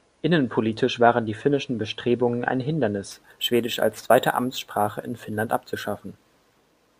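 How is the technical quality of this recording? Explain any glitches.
The recording has one fault. From 3.11 s to the end, a bright metallic fizz between 11 and 22 kHz shadows the speech at about 23 dB down. This is imaging from sample-and-hold upsampling: samples were repeated without smoothing, which fits a rate doubled from about 22 kHz, mirroring the spectrum upward.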